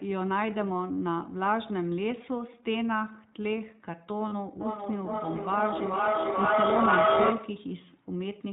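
Throughout the speech there is a narrowband, slightly rough and synthetic quality, with nothing present above 4 kHz and plainly audible coding damage. This is the iLBC codec at work. It codes each short frame's excitation independently, and the texture here fits its 20 ms frame mode at around 15.2 kbps. Detail above the telephone band is simply discarded, and the excitation model leaves that faintly buzzy, artificial edge on the speech.

At 4.28 s the sound briefly turns into a held, slightly buzzy vowel for about 40 ms before clean speech returns by 4.33 s. These are lost iLBC frames. The gap fits two missing 20 ms frames, and the decoder filled them by repeating the last pitch cycle blended with noise. Because each iLBC frame stands on its own, the decoder recovers almost immediately once packets arrive again, so the glitch stays short and contained.

From 4.61 s to 7.73 s, speech starts coming back at a steady spacing of roughly 0.4 s, with each return thinner and more ringing. 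Instead of dying away, the repeats stack up, peaking at about 6 dB above the original speech. This is feedback echo between two devices. Two devices in the same room joined the call, and one device's loudspeaker fed the other's microphone. Each echo canceller only removes its own playback, so with this much loop gain the copies accumulate rather than decay.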